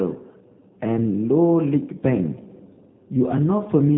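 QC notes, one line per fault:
Throughout: G.729 codec. The speech is rebuilt from a vocal-tract filter, pitch predictor and sparse pulses, giving a plainly rough, buzzy, synthetic edge that fits 8 kbit/s G.729A. A spectrogram shows a hard ceiling near 3.9 kHz with blank bands above.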